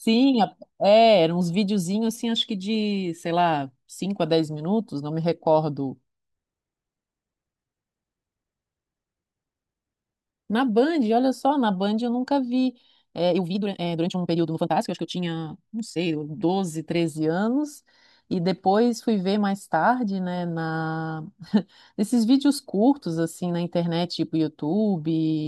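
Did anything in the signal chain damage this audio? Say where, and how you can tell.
Yes. From 13.27 to 16.49 s the speech abruptly runs at about 1.9 times its surrounding pace while its pitch stays put, then snaps back to normal speed. That pitch-preserving speed-up marks a time-stretched section, likely introduced by software processing after capture that compressed this stretch to fit a shorter length. It sheds short slices of the waveform and splices the remainder together, which gives the passage its rushed sound.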